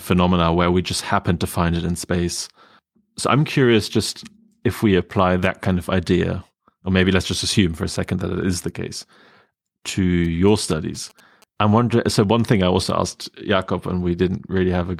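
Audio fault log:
10.24–11.44 s GSM signalling bursts: a nearby 2G phone sent short groups of radio bursts while signalling, and the audio circuit rectified them into the signal, leaving a faint galloping dit-dit-dit of short 217 Hz buzzes well below the speech, ending just before "I wondering".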